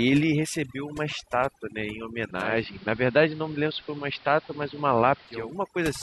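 Overdone noise removal runs through the whole speech clip. The noise reducer was set too aggressively, so each frequency band that came close to its noise estimate was pushed far down or switched off, and the quieter parts of the speech went with the noise. The background falls to an unnatural near-silence scattered with twinkling specks.

Digital radio blending to analogue runs from 2.28 s to 5.60 s. The receiver lost the digital stream and cross-faded over 368 ms to the station's AM broadcast, then faded back at the end of the span. Hiss rises to roughly 25 dB below the speech, and the level shifts by about 2 dB at each blend.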